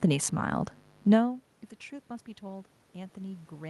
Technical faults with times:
2.39-3.70 automatic gain rising

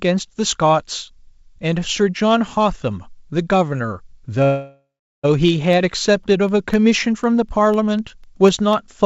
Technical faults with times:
4.44-5.26 call audio freeze
5.48-8.73 periodic USB or driver dropouts

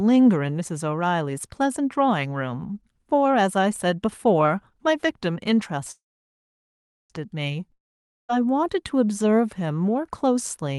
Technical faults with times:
5.91-7.12 call audio freeze
7.72-8.31 long network dropout

